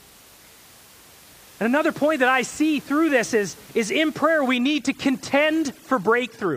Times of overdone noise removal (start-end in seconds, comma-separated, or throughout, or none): 4.57-6.57